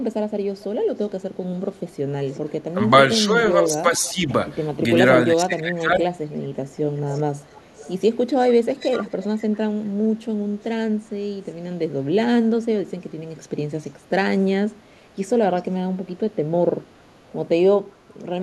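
Speech with echo leak: a faint copy of the talker, delayed by 402 ms and roughly 20 to 40 dB below the speech, returns at 1.73–2.39, 4.06–4.32, 6.25–9.57, 13.81–13.9, 15.57–15.62 and 16.89–17.16 s, likely a far-end loudspeaker echo the canceller failed to remove. Speech suppressed in double talk also occurs: the voice dips by a few dB across 2.74–4.29 s and by about 20 dB at 5.33–6.03 s, likely the canceller attenuating overlapping talk.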